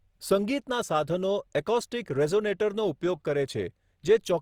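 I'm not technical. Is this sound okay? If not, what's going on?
No. Throughout, the speech sounds grainy and rough rather than swirly or muffled, which likely points to Opus compression squeezing the audio to save space.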